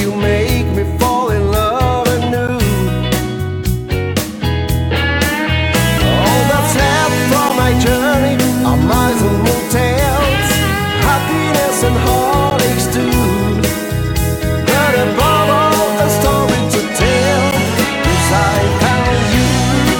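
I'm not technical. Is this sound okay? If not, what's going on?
No. There is a gap between chunks: brief 12 ms silences at 2.48, 7.49, 12.50 and 17.51 s, where separately delivered 5-second pieces join.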